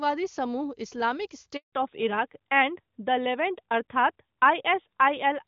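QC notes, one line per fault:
1.57 to 1.73 s, handover gap: the speech fades out within a few tens of milliseconds and there's 160 ms of dead air before it picks up again. The call is switching networks and no speech frames get through meanwhile, so whatever was said there is simply gone.
1.73 s to end, fallback to narrowband: right after the gap, everything above 4 kHz disappears and the speech goes duller and rougher. Before this the call sounds clean on HD Voice, which fits AMR-WB at a high rate. Afterwards it sounds like the older AMR-NB codec, most likely at its top 12.2 kbit/s mode.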